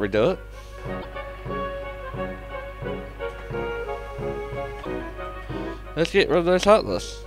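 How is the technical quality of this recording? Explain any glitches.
Two short glitches break the audio, at 1.01 s and again at 4.82 s, each lasting about 44 ms. Both are likely a broken MP3 bit reservoir: frames were lost, so the following frame reached back for borrowed data and decoded bytes belonging to another frame. The span is close to two 26.1 ms frames. Unlike a plain dropout, which resumes where it stopped, the audio here jumps ahead and the first frames after the cut are garbled.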